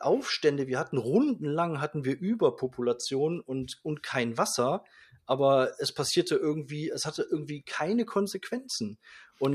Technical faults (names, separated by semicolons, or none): none